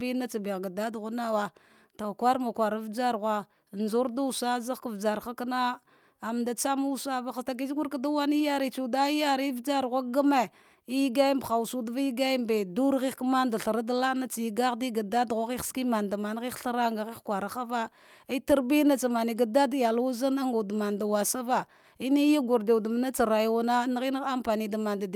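A speech recording with nothing technically wrong with it.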